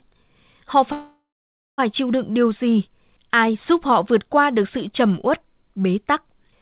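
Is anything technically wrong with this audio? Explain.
Yes. From 0.92 to 1.80 s the speech halts in what sounds like a call audio freeze, over a call path band-limited to 4 kHz, which fits G.711 mu-law. The last sound is held as a fading buzz, then about 0.56 s of silence, likely because delayed packets left the jitter buffer empty. The speech then resumes exactly where it stopped, about 0.86 s late with nothing skipped. That continuity sets it apart from a packet-loss dropout, where speech is cut out.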